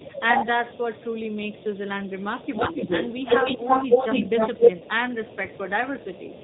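Throughout, the speech carries G.729 codec damage at 8 kbit/s: a hard spectrogram ceiling at 4 kHz and a rough, synthetic texture. From 0.00 to 0.07 s a faint echo leak sits about 25 dB down, trailing by 173 ms, likely from a loudspeaker echo the canceller missed. From 0.04 to 0.49 s the voice dips by about 5 dB for roughly 0.3 s, a shallow notch in the waveform envelope, likely speech suppressed in double talk. From 0.44 to 5.37 s the echo leak returns much stronger, a 270 ms delayed copy at about the same level as the speech, appearing as doubled, offset energy bands on the spectrogram. At 4.78 s a 20 ms dropout, which fits one lost packet, is filled by VoIP packet loss concealment from the speech codec, giving a brief, fading smear with no clean gap. From 5.03 to 6.19 s the voice is pushed down by up to about 20 dB in pieces totalling about half a second, with deep troughs in the waveform. 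From 5.68 to 6.44 s a faint 270 ms echo lingers about 25 dB below the speech.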